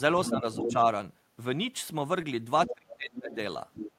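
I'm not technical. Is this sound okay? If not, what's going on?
No, there are a few problems, all in a clip of about 4 seconds of speech.

Other side's voice leaking through: a second voice sneaks in at 0.25 to 0.4 s, 0.6 to 0.75 s, 2.66 to 2.95 s, 3.16 to 3.34 s and 3.73 to 3.91 s. The first two bits are fairly loud, the 2.66 and 3.73 s ones quieter, and the 3.16 s one faint. It's likely the person at the other end coming out of this talker's loudspeaker and getting picked up again by the microphone, because the echo canceller didn't scrub it all out.

Speech suppressed in double talk: the main voice gets pushed down while that other voice is present. From 0.29 to 0.75 s it's a mild dip, about a third of a second in total. From 2.67 to 3.38 s it's much worse, with the voice nearly disappearing for around half a second. With both people talking at once, the echo canceller likely couldn't tell them apart and turned everything down together.

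Short concealed packet loss: at 2.21 to 2.25 s there's a tiny smear. About 20 ms of audio never arrived, and the receiver patched the gap by stretching the sound just before it. That's why you hear a brief blur there instead of a clean gap.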